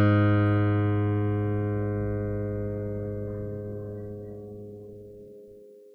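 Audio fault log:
No faults can be heard anywhere in this music clip.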